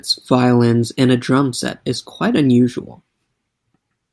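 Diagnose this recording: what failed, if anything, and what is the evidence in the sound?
No failure found in this recording.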